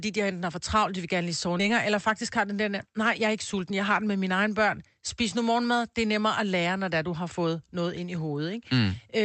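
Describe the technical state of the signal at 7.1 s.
At 7.1 s the speech is intact, with no dropout, distortion or other fault, only the ordinary coding character of the call path it passed through.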